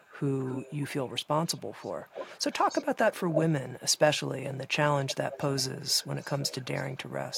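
A delayed copy of the speech trails behind it in eight stretches: 0.00–0.13, 0.40–0.78, 1.03–1.25, 1.45–2.86, 3.30–3.40, 5.05–5.15, 5.32–7.12 and 7.30–7.37 s. This is an echo leak, likely from a far-end loudspeaker whose echo canceller let residue through. The level ranges from barely audible to, briefly near 3.3 s, as loud as the speech. Unlike room reverberation's smooth decay, it is a distinct repeat whose lag drifts from 271 to 301 ms.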